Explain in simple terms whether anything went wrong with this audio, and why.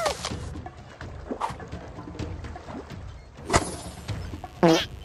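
Mains buzz from 3.45 s to the end: electrical spikes from the 50 Hz power supply leak into the recording, leaving a steady, raspy buzz beneath the sound.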